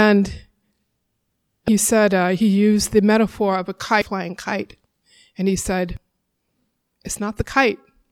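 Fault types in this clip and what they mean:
Damaged data in a compressed stream: corrupted frames make the decoder lose sync and skip ahead, producing three short blips at 1.68, 4.02 and 5.97 s.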